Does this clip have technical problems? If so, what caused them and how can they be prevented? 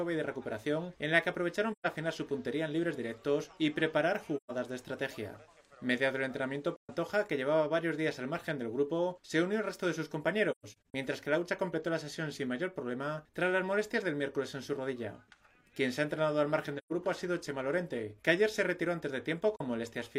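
Yes. Soft-edged gaps fade the sound out and back in at 1.72, 4.37, 6.76, 16.78 and 19.56 s, and a broken patch from 10.51 to 10.95 s. This is AAC frame loss with muting. Lost frames decode as silence: 128 ms each time, 43 ms at 19.56 s, and 256 ms scattered across the 10.5 s patch. Reliable transport with retransmission or forward error correction prevents it.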